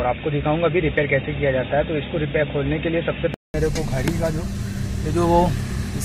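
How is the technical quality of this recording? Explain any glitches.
The recording has one clear fault. From 0.0 to 3.54 s the sound is dull and boxy, with nothing above 3.7 kHz and a faint noise floor about 40 dB down. It then clears up after a 200 ms silence, likely an input switched to a poorer device partway through.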